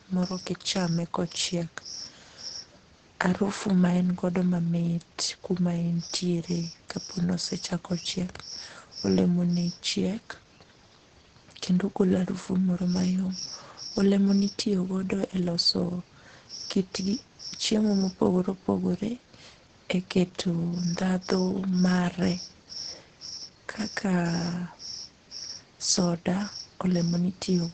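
Muffled, hoarse speech runs through the whole clip, with nothing above about 9 kHz. This is heavy Opus compression, likely in its speech (SILK) mode at a low rate of around 12 kbps, which narrows the bandwidth to wideband and trades detail for intelligibility.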